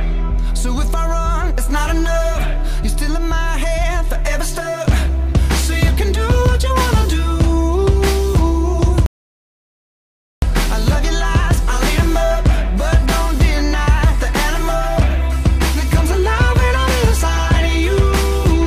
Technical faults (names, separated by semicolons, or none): audio dropout to silence